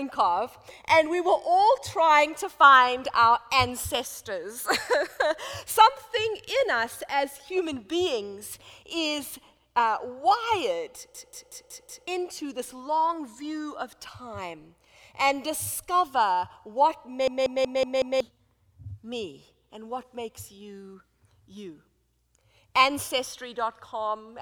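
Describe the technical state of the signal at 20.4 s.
At 20.4 s the signal is intact, with no audible fault at that point.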